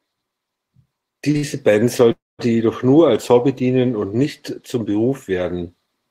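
At 1.31 s and again at 1.37 s, back to back until 1.45 s, there are two short stalls from a late packet. Each time the jitter buffer ran dry and the last sound was stretched, by 33 ms and then 61 ms, before carrying on with nothing lost. It comes across as a brief held, slightly buzzy smear rather than a break.

From 2.12 to 2.41 s comes a call audio freeze, a much longer hold of about 269 ms, likely caused by packets delayed in transit. Unlike the stalls, the sustained sound fades out and leaves roughly 200 ms of silence before the audio resumes where it stopped, shifted later but complete.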